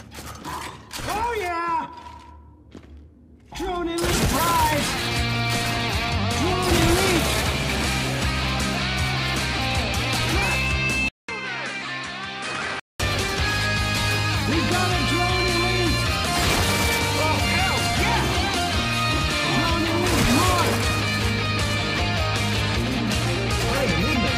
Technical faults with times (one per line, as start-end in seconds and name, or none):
11.08-13.00 input switched to a poorer device